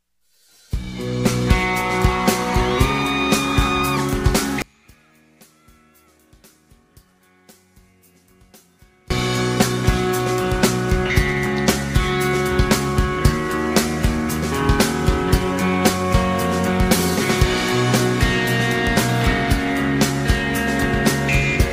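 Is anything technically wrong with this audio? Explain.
Yes. From 4.62 to 9.10 s the audio collapses in level by about 33 dB, most likely because one channel inverted: a stereo channel with reversed polarity cancels against the other once the two are summed to mono. Everything common to both sides subtracts away, so the centred content nearly disappears. What remains is only the small difference between the channels, heard as a faint trace until the full sound returns at 9.10 s.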